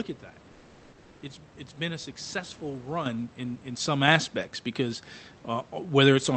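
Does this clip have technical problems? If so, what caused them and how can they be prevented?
Yes. Two kinds of fault can be heard, both tied to the call path.

Comfort noise in place of the background, from 0.51 to 1.21 s: for about 0.7 s the room's natural background gives way to a smooth, uniform hiss, about 1 dB quieter and lacking the texture of the real noise, which sits roughly 33 dB below the loudest sound. The likely cause is Opus discontinuous transmission: the sender stopped transmitting during the pause and the receiver synthesised a stand-in. A noise gate or suppressor would instead cut toward silence, whereas here the noise continues but is featureless. Disabling DTX on the sending side prevents it.

Microphone volume stepped up, at 3.06 s and again at 4.08 s: the whole signal, speech and room noise together, jumps by about 8 dB and then by a further 5 dB, each time in a single instant step. 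A compressor or gain rider would ramp and pump, rising and falling with the sound, but these are abrupt, permanent level changes, which is the mark of the call software raising the device's input volume. Turning off automatic microphone level adjustment and setting the input gain by hand prevents it.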